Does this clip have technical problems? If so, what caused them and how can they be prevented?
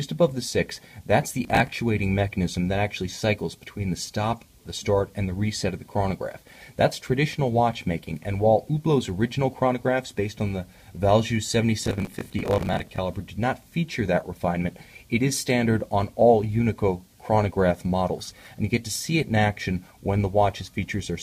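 Yes. Processor overload crackle occurs from 1.44 to 1.77 s and from 11.82 to 12.98 s. Audio buffers of about 10 ms repeatedly missed their deadlines, each gap filled with hard-edged old audio, so the repeats form gritty crackle. Reducing processing load or using larger buffers prevents it.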